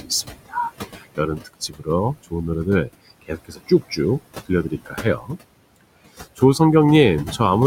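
Noise suppressor artifacts run through the whole clip. The suppressor treats steady bands as noise and pulls them down by about 20 dB frame by frame, so the room noise, about 13 dB under the speech, sinks between words and swells beneath them.

Speech cut by the noise suppressor occurs at 0.26–0.55 s, 0.92–1.19 s, 1.37–1.88 s, 3.22–3.98 s, 4.44–5.33 s and 6.15–6.42 s. Quieter parts of the speech were mistaken for noise and dropped by about 16 to 19 dB, so soft consonants and word endings sound swallowed for a few tenths of a second at a time.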